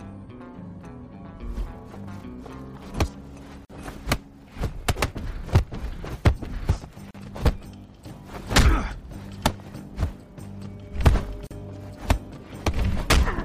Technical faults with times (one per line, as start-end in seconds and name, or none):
3.65-3.70 gap at a join of encoded pieces
7.11-7.14 gap at a join of encoded pieces
11.47-11.51 gap at a join of encoded pieces